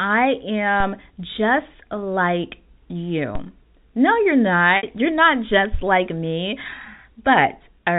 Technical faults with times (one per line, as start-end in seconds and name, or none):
0.80 DC step
3.35 DC step
4.77-4.83 packet loss with pitch repetition